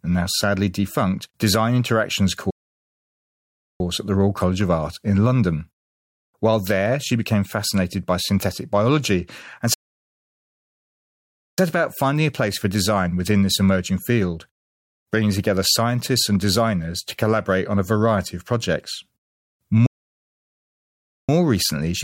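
The speech cuts to silence three times in a playback stall: 2.50 to 3.80 s, before "at the"; 9.74 to 11.58 s, between "by synthetic biology and" and "about finding a place"; and 19.86 to 21.29 s, before "recently she's turned her". Each gap lasts 1.3 to 1.8 s. The player likely ran short of data.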